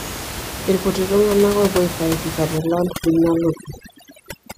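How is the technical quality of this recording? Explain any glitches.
The second half of the recording is damaged by overdone noise removal, while the room noise sits about 10 dB under the speech. From 2.58 s, right after "aifaidika te", to the end, a noise reducer set far too aggressively silences any frequency band near its noise estimate. The background collapses into near silence with twinkling specks. Unlike codec artefacts, the damage tracks the noise floor, not the bitrate.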